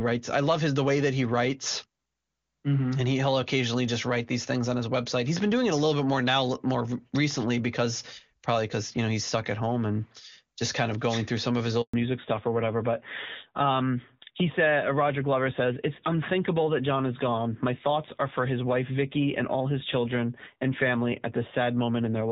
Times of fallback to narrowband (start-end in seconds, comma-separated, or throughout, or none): 11.93-22.32